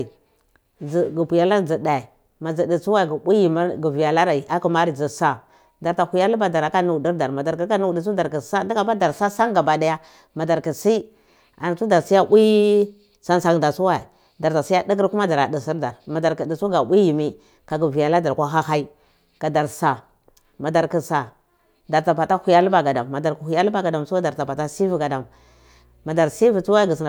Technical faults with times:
24.78-27.09 mains hum

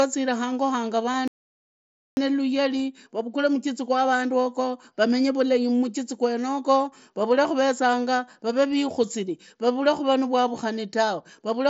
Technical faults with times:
1.13 concealed Bluetooth headset packet loss
1.28-2.17 audio dropout to silence

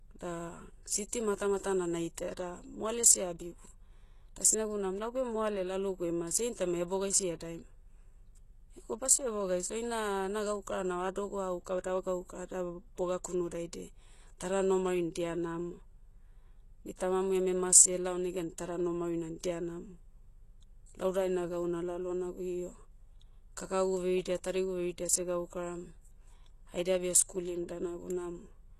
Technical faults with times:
0.00-28.79 HE-AAC compression
1.08-1.12 pre-echo

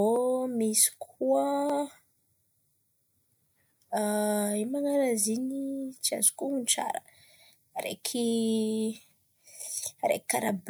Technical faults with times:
none

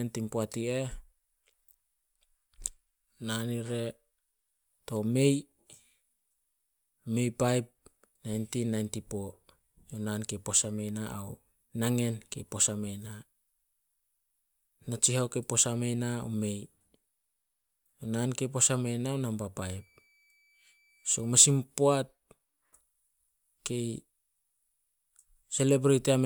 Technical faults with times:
19.60-21.60 switching supply whistle

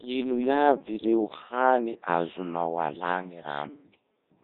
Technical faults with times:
0.00-4.43 Codec 2 vocoder
0.98-1.05 bit errors on digital voice radio

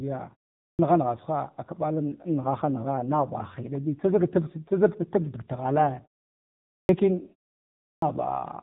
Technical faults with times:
0.00-8.63 AMR narrowband mobile codec
0.67-0.79 clipped start after a pause
6.77-6.89 clipped start after a pause
7.91-8.02 clipped start after a pause

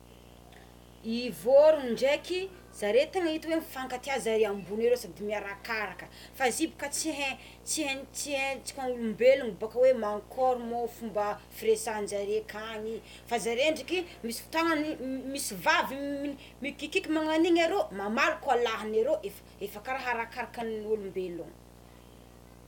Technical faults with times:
0.00-22.67 video or display buzz

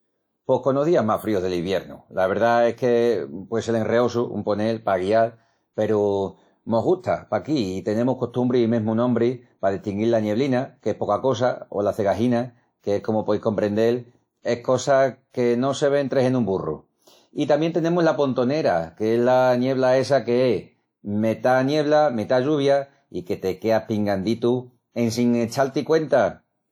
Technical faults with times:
0.00-26.72 low-bitrate audio saved at a high bitrate

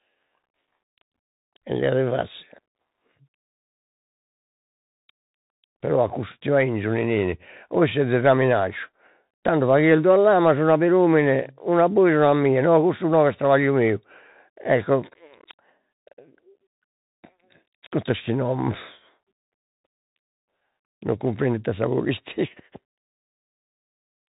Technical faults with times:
0.00-24.32 Bluetooth CVSD headset codec

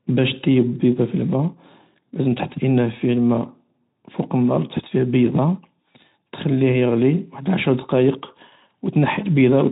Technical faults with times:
none

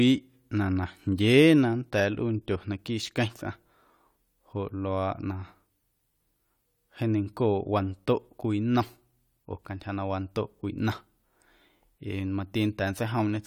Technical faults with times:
none

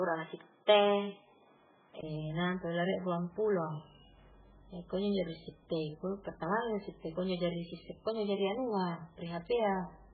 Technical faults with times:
0.00-10.14 MP3 compression
0.00-2.03 input switched to a poorer device

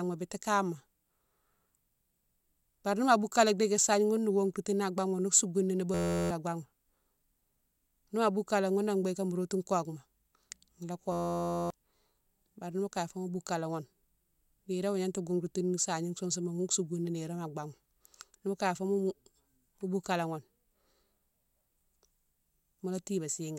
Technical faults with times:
5.94-6.30 system hang loop
11.12-11.70 system hang loop

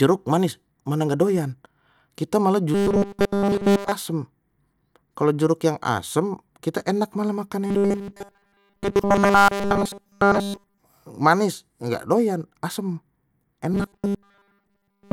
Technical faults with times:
2.74-3.92 robotic sound from repeated short buffers
7.66-10.80 robotic sound from repeated short buffers
13.73-15.12 robotic sound from repeated short buffers

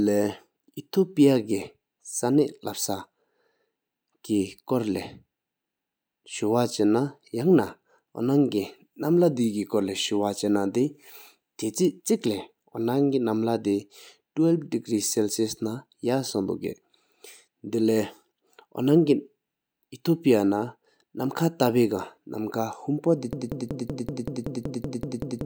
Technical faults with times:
23.33-25.45 broken-record loop

